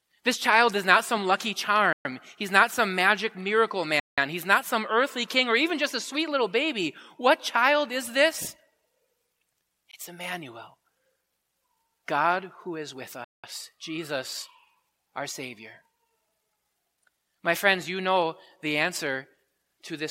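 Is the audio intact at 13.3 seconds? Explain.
No. Right after "who is with", the speech drops out to dead silence from 13.24 to 13.44 s, a gap of about 0.19 s, and then resumes. That clean stop-and-restart is the signature of a Bluetooth stall: interference likely delayed the wireless packets, the receiving buffer emptied, and playback simply waited until the retransmitted audio arrived before carrying on.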